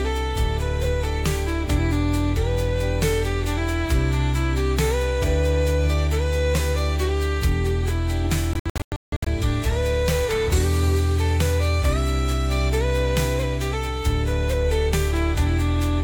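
From 8.53 to 9.27 s the audio repeatedly cuts to silence, losing 508 ms in all (longest gap 162.5 ms), then continues as if it had played on. This is likely a Bluetooth dropout, with late packets discarded.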